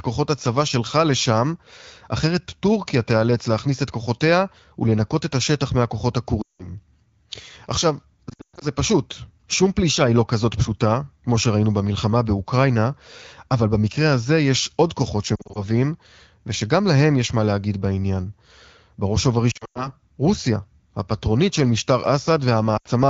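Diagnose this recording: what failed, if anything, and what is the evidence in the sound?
Lost AMR speech frames at 6.42–6.72, 8.29–8.66, 15.35–15.65, 19.51–19.90 and 22.77–22.87 s, a radio-network fault. Frames failing their checksum were concealed by replaying the last pitch and vocal tract settings at falling gain, so speech smears, warbles and fades, then returns rough.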